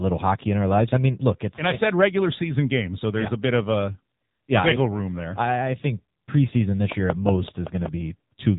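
Throughout the clip the speech has passed through the AMR narrowband mobile codec at a low rate, which fits the 6.7 kbps mode. Nothing above 3.8 kHz survives, so the voice sounds muffled and phone-like, with heavy buzzy, synthetic coding damage.

From 6.92 to 7.87 s, something, likely interference or a struggling interface, injects a train of clicks at a regular 5.3 per second. About seven similar pops tick over the sound, peaking roughly 15 dB above the speech level.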